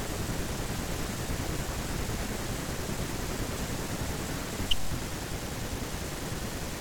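Nothing in the recording stood out as a technical problem on listening.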